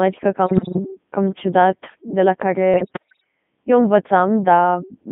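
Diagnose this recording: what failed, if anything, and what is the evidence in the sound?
Codec stage: throughout, the speech is buzzy and robotic within 150 Hz to 3.6 kHz. This fits the Codec 2 vocoder at 3.2 kbit/s, where the decoder resynthesises sine waves rather than merely band-limiting the waveform.

Network stage: bit errors on digital voice radio occur at 0.47–0.79 s, before "cam ciudat de la", and at 2.74–3.24 s, after it. Corrupted frame parameters make pitch and level warble, where packet loss would leave gaps.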